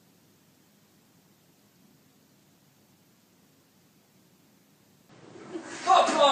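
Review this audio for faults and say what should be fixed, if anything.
At 5.09 s the sound turns duller to the end, likely an input switched to a poorer device; the spectrogram shows an abrupt shelf with nothing above 9 kHz, plus a faint new noise floor. Lock the recording input so the system cannot change devices mid-take.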